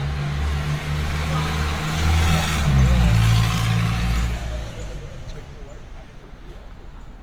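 Throughout, the sound is grainy and rough, with tones roughened by noise filling. This is likely Opus compression in CELT mode at a low rate near 24 kbps, with the full band kept to 20.1 kHz.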